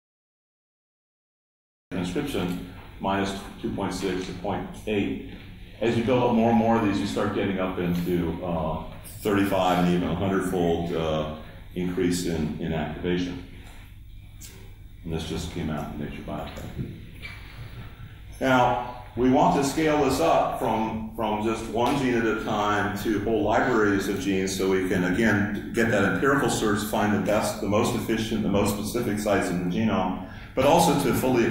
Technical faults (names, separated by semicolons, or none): cut-off start